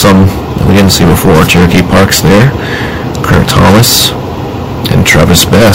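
From start to finish the audio suffers hard clipping. The signal was driven about 22 dB beyond what a stage in the chain could pass, so every peak was sliced flat at the ceiling, and around a fifth of all samples sit pinned there. That overload is large enough to give a constant harsh fuzz on every loud moment. The waveform shows squared-off tops and bottoms, and a spectrogram shows dense harmonic smearing up through the high kHz range.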